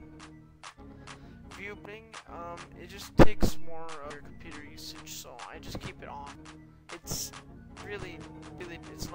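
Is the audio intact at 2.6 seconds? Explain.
Yes, the audio is intact at 2.6 seconds, with no dropout, click, distortion or other fault at that moment.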